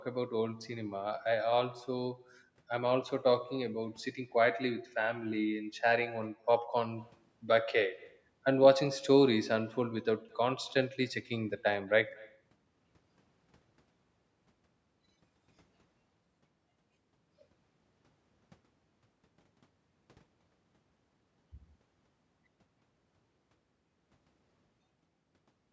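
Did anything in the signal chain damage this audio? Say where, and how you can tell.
Yes. The damage is at the network and far-end stage: an echo with no canceller runs through the whole speech clip. Each phrase returns about 27 dB down, roughly a fifth of a second later, thin. The far loudspeaker feeds its microphone, and nothing subtracts it.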